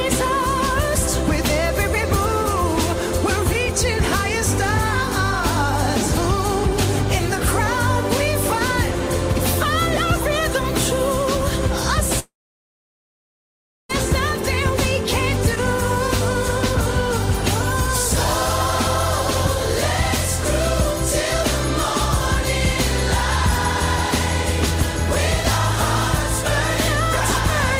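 At 12.19 s the audio breaks off and does not return until 13.91 s, a gap of about 1.7 s, which is most likely a long network dropout. The receiver briefly carries the last sound forward as a fading buzz or hiss, then falls to silence for roughly 1.6 s of the gap. When playback resumes, it picks up further along, and the 1.7 s of material that never arrived is simply absent.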